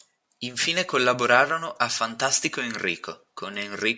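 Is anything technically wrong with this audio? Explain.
No, nothing in this speech recording registers as a technical fault.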